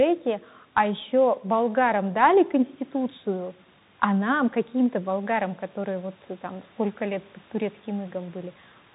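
Throughout the speech, everything above about 3.8 kHz is missing, s sounds turn scratchy, loud bright passages break up, and a granular hiss sits underneath. That is the Bluetooth CVSD headset codec, which fits a 64 kbps link: one-bit up-or-down steps whose adaptive size cannot keep pace with fast-changing sound.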